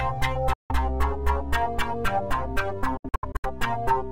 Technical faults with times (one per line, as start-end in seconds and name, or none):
0.53-0.72 Bluetooth dropout
2.97-3.46 Bluetooth dropout